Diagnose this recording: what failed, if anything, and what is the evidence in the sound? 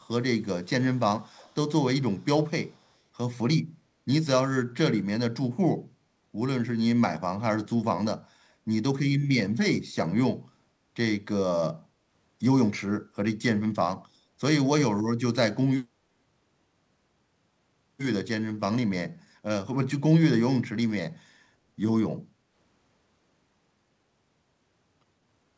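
Echo leak, in call processing: a very faint copy trails the speech by 173 ms at 1.19–1.55, 2.15–2.26 and 2.67–2.91 s, likely far-end canceller residue.

Background gated by the echo canceller, also in call processing: the room sound dips by about 6 dB at 22.32–22.49 s while the canceller clamps the microphone, then recovers.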